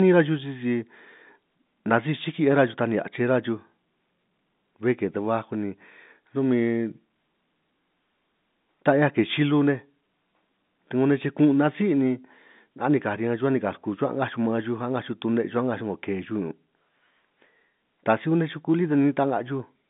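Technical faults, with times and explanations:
No technical faults can be heard anywhere in the recording. The speech carries the narrow band of G.711 telephone coding, running from about 150 Hz up to 3.7 kHz with nothing above 3.8 kHz, as an ordinary phone line would deliver it.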